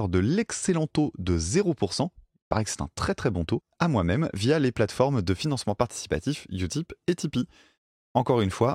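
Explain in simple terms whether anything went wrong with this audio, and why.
From about 5.26 seconds, right after "via les plateformes", through to the end, the speech picks up a faint hiss and roughness: sample clock jitter. The recorder's timing clock wobbles by a couple of millionths of a second, so each sample is taken slightly off time. Unlike steady background hiss, this noise follows the speech, growing on loud and bright sounds like "s" and fading to nothing in the pauses.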